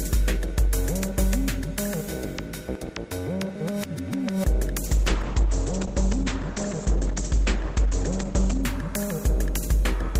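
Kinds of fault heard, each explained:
call bitrate drop: a falling bandwidth estimate starved the encoder of bits, so for nearly 4 s the audio turns coarse and watery, with highs cut above 8 kHz.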